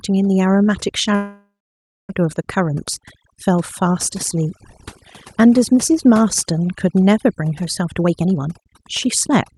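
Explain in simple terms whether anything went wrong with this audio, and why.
A few things went wrong. Overdone noise removal runs through the whole clip: the cleanup was set too hard, so the background drops away and breaks up into twinkling specks.

From 1.15 to 2.11 s there's a call audio freeze, likely from delayed packets. The sound stalls, about 0.59 s of it silent, then picks up exactly where it stopped, with nothing lost.

From 7.80 s to the end, a jitter buffer speed-up kicks in. Tiny slices totalling roughly 0.4 s get cut, so the speech runs at about 124% speed without changing pitch.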